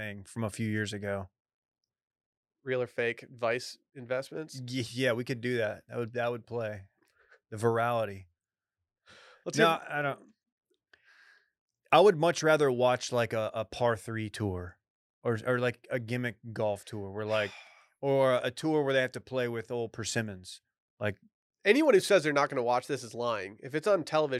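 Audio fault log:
No faults heard anywhere in the speech recording; nothing to log.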